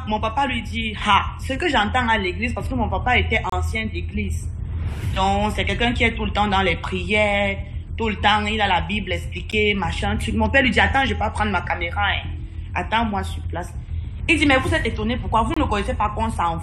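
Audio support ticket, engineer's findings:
Gap between stream segments at 3.50–3.53 s, 9.51 s, 15.54–15.57 s, every 6 s: timestamp misalignment, player pads silence. Waveform flat-lines with hard edges; spectrogram shows blank vertical strips.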